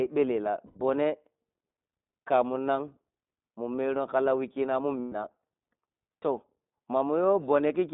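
Speech coded with the iLBC codec throughout, with the band limited to roughly 200 Hz to 3.7 kHz. The codec damage is plainly audible as a rough, slightly synthetic texture, consistent with iLBC's 15.2 kbps mode and 20 ms frames. Lost iLBC frames produce two short concealment gaps, at 0.66–0.78 s and 5.00–5.13 s. Each sounds like a held, buzzy vowel as the decoder repeats the last pitch cycle mixed with noise. The lengths fit five and six missing 20 ms frames, and speech recovers almost immediately afterward.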